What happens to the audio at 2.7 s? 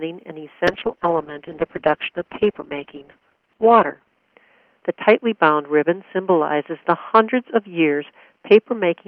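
At 2.7 s the call is in the middle of a bitrate drop that begins at 0.69 s and lasts to the end of the clip. The bandwidth estimate collapsed, so the encoder was pushed from 64 kbps down to 7 kbps, held at that floor for about 3.4 s. With so few bits it quantises coarsely and narrows the band from 20 kHz to 4 kHz, leaving the sound muffled, rough and watery, stripped of its upper detail.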